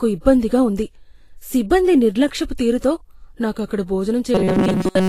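Lossy coding, likely Vorbis compression at a low rate fitting around 34 kbps, lowers the cut-off and quantises the treble, leaving the speech hissy and grainy throughout. From 4.35 to 5.09 s, robotic sound from repeated short buffers sets in, likely from a stalled stream looping roughly 5 ms chunks over most of that stretch, imposing a rigid metallic buzz at 188 Hz.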